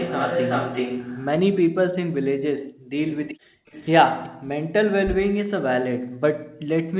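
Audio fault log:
0.00–1.26 s, echo leak: a delayed copy of the speech trails by 376 ms at only about 5 dB below it. Likely the far loudspeaker feeding back past its echo canceller.
2.58–3.68 s, background gated by the echo canceller: room sound drops by about 40 dB for roughly 0.7 s in total, cut while the loudspeaker played.
3.08–4.29 s, echo leak: a faint 376 ms echo returns, about 25 dB down. Likely leftover loudspeaker sound the canceller missed.
4.32–5.29 s, speech suppressed in double talk: the speech dips by roughly 40 dB for about half a second. Likely the canceller muting it during overlap.
5.96–6.69 s, background gated by the echo canceller: background again falls away by about 40 dB for roughly 0.7 s, returning when the canceller releases.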